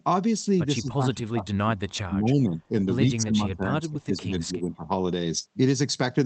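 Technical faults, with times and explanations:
0.81–2.71 s and 3.15–4.83 s, speech suppressed in double talk: the voice repeatedly dips, drops by up to roughly 30 dB or breaks into pieces for about a second and a half in each span, likely because the echo canceller cannot separate the talker from overlapping far-end speech and attenuates both.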